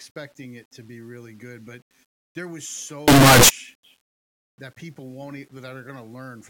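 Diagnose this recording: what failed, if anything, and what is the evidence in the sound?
A sample-format conversion stage likely mixed up signed and unsigned 8-bit samples from 3.08 to 3.49 s. The flipped top bit turns each zero crossing into a full-range jump, so that stretch erupts into harsh, very loud distortion where quiet moments are as loud as the rest.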